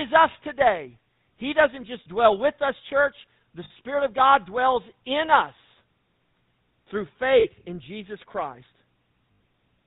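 GSM full-rate codec, throughout: the sound is plainly rough and buzzy, with nothing above 4 kHz. The codec rebuilds the vocal tract from a coarse model excited by sparse, evenly spaced pulses, a character that fits the 13 kbps full-rate coder.

Lost GSM frames at 1.04–1.06 s just after "us today", 3.64–3.71 s, 7.4–7.47 s and 9.32–9.4 s: gaps of 20 to 80 ms are filled by repeating the last good frame, leaving a brief metallic, ringing hold.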